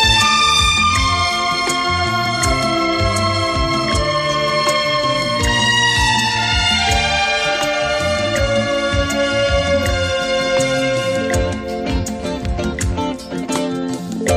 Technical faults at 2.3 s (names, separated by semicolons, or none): none